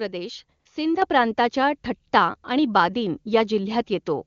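From 0.59 to 0.65 s the real background briefly drops out and is replaced by a smooth, steady hiss for about 60 ms. This is AMR comfort noise: the phone judged the talker silent, stopped sending speech frames, and the receiver synthesised noise from a coarse level-and-spectrum estimate.

At 1.02 s the voice and background jump up together by about 6 dB in a single step. The microphone volume was stepped up: the call software decided the input was too quiet and raised the device's input gain at once.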